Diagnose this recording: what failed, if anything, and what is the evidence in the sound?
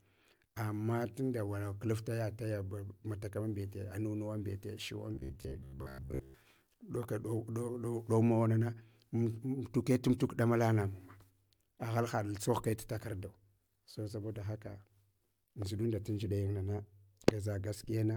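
The fault sits at the driver or buffer stage. Right after "mbete shuwan", from 5.14 to 6.34 s, the speech turns into a rigid, metallic buzz that only loosely tracks the words. The buzz sits at 66.7 Hz, which fits a repeated slice about 15 ms long. Most of that stretch is repeats rather than real audio. This is robotic sound from repeated short buffers, likely caused by audio arriving too seldom, so the last short block was replayed while new material was skipped.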